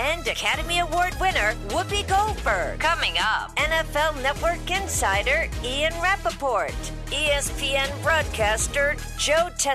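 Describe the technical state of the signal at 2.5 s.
At 2.46 s, compressed frames are skipped. The audio jumps ahead roughly 50 ms, which fits about two 23.2 ms frames.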